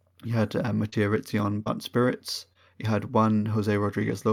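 From 0.89 s to 4.13 s the speech carries scattered short gaps: about three brief dropouts where packets went missing or arrived too late, the longest around 30 ms. The receiver covered each hole by extending the last stretch of sound, patching roughly 70 ms in total, a couple of percent of that span. The result is mostly clear speech interrupted by small ticks, smears and momentary hiccups at those points.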